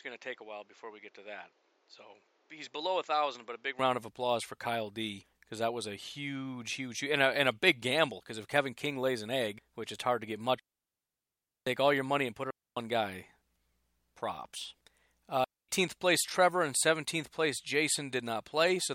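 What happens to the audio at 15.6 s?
The speech drops into a clean hole of near silence from 15.44 to 15.69 s, a gap of about 245 ms, with no crackle, hiss or burst of noise on either side; the sound simply fades out almost instantly and returns. This is a digital wireless dropout: the radio link lost too much data to rebuild the signal, so the receiver muted its output with a very short fade rather than pass on corrupted audio.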